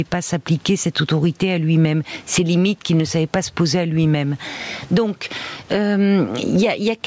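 Throughout, the gain is pulled down under loud speech, swinging by about 15 dB. This is gain pumping, likely from excessive microphone gain driving a fast limiter.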